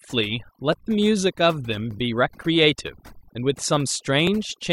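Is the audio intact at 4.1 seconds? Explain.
No. Clock drift buffer slips run from 0.73 to 4.27 s, clicking every 1.18 s. Two independent clocks, likely off by roughly a thousandth, let the buffer drift until a small block of samples is dropped or repeated, heard as a regular pop. Overdone noise removal also runs throughout, including at 4.1 s. Aggressive reduction switches off individual frequency bands near the noise estimate, taking quiet speech detail with them. The background drops and breaks up into twinkling specks.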